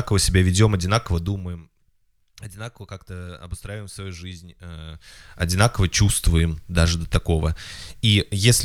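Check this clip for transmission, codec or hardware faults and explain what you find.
One fault shows up: zipper noise from 1.12 to 1.64 s. The level drops by around 20 dB in 1 dB jumps, about thirty a second, instead of gliding down smoothly. Each jump leaves a tiny click, so a quick ticking rides on the speech as it fades.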